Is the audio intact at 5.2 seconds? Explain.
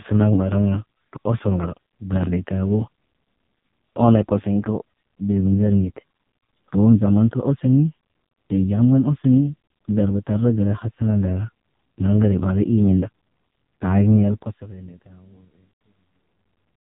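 No. At 5.2 seconds, as throughout, the AMR narrowband mobile codec at 4.75 kbps cuts everything above 3.8 kHz and makes the speech buzzy and synthetic, unlike a clean low-pass filter.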